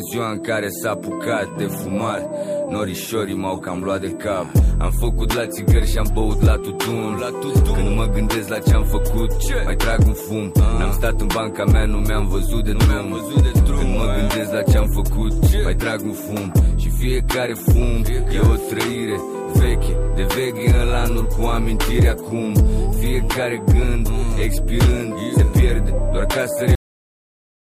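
A steady USB whine sits under the audio throughout, a fixed 8 kHz tone strongest at its 16 kHz multiple, about 25 dB below the signal, drawn as unbroken horizontal lines on a spectrogram. At 26.75 s the audio has a cut-off end, stopping mid-sound into flat digital silence with no decay, because the final buffers were never written or played.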